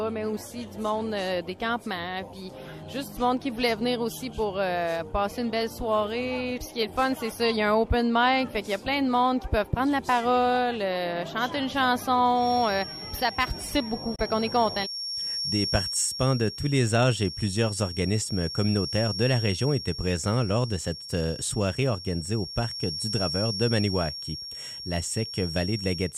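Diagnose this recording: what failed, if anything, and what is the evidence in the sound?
From 12.33 s to the very end there's a thin, steady feedback whistle at 5.5 kHz, sitting roughly 10 dB under the sound and swelling and fading slowly in level. That points to the analogue acoustic path, most likely a loudspeaker-to-microphone loop with just enough gain to sit on the edge of feedback. One frequency keeps recirculating without building into a full howl, which is why it hangs there instead of running away.

Then there's a brief digital broadcast dropout between 14.15 s and 14.19 s, on the reception side. The audio fades out over about 8 ms, sits in a short silent hole, and comes back. About 24 ms of sound is simply gone, which fits a single lost or corrupt frame. The receiver muted until it got a clean frame again, and nothing sent during that gap can be recovered.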